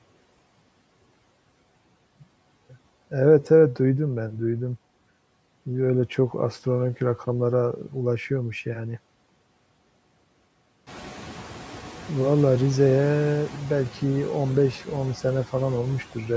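Noise suppressor artifacts run through the whole speech clip. The suppressor judges steady background to be noise and cuts those bands by about 11 dB, frame by frame. The noise sinks in pauses and swells back under speech. This pumping is easier to hear after the room noise climbs about 14 dB near 11 s.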